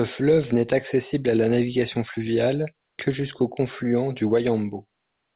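No faults are audible in the speech; the call path leaves only its expected narrowband sound with nothing above 4 kHz, which fits G.711 A-law coding.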